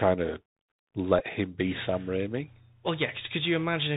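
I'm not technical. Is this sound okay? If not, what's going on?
No. The whole recording comes through a Bluetooth CVSD headset codec, the old phone-call mode: everything sounds muffled and hissy, and s sounds scratch, unlike a merely quiet, dull microphone. Then, from 1.19 to 1.24 s, a Bluetooth headset packet repeated: the wireless link briefly dropped and the headset replayed its last scrap of sound, making a short buzz rather than a silent gap.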